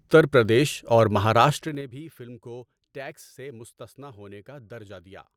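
From 1.47 to 1.90 s, just after "پردیش اور", a level drop of roughly 20 dB is applied in unsmoothed 3 dB steps, about fifteen a second, producing audible zipper noise.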